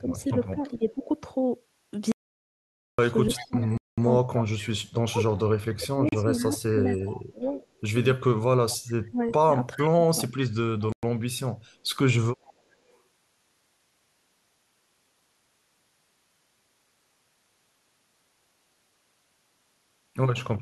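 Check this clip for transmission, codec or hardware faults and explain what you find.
Four kinds of fault are present in this speech: echo leakage, double-talk suppression, one dropout to digital silence, and three short Bluetooth-style stalls.

Speech suppressed in double talk runs from 0.0 to 1.09 s and again from 3.37 to 11.28 s. The speech dips in level by about 15 dB at first and about 25 dB in the longer stretch, covering roughly 0.4 s and roughly four seconds in total. This is likely an echo canceller attenuating its own talker while the far side spoke. The waveform shows the envelope pumping down, and the spectrogram shows the upper bands thinning.

Echo leak appears at 0.18–1.05, 3.33–3.67, 6.57–7.67, 8.70–8.77, 9.79–9.89 and 12.44–12.97 s. It is a faint copy of the voice trailing by 414 ms, about 15 to 30 dB below the direct speech. This likely means loudspeaker pickup slipped past cancellation. 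The spectrogram shows ghost harmonics offset 414 ms later.

Audio dropout to silence occurs from 2.12 to 2.99 s, losing 0.87 s. The sound cuts off mid-flow with no room tone at all, likely because the input was lost while recording continued. The waveform shows a flat line, and the spectrogram shows a fully black band across every frequency.

Bluetooth stalls occur at 3.78 s (202 ms), 6.09 s (35 ms) and 10.92 s (106 ms). Playback halts to silence, then resumes, which likely reflects a wireless buffer underrun while packets were resent. Each stall shows as a sharp-edged flat gap in the waveform and a narrow black vertical strip on the spectrogram.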